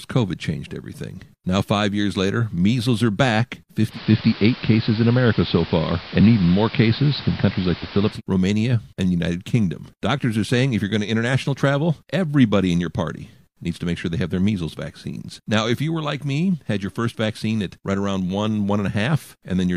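From 3.87 s to 8.21 s the receiver loses its digital signal and makes a digital radio blend to analogue, cross-fading over 128 ms to the AM broadcast of the same station and later fading back. On the AM path the bandwidth is narrower, so the top end goes dull. The level shifts by about 4 dB, and a hiss sits roughly 20 dB under the programme until the digital signal returns.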